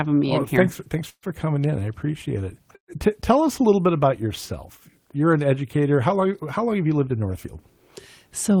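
At 1.09 s the sound stalls into a short fading buzz for about 0.13 s, partly dropping to silence for about 70 ms, then resumes exactly where it stopped. At 2.76 s the same call audio freeze recurs for about 0.12 s, with about 100 ms of it silent. Nothing is lost in either case. The likely cause is delayed packets draining the jitter buffer. The receiver stretched the last sound to cover each wait, adding 133 ms and then 124 ms of delay.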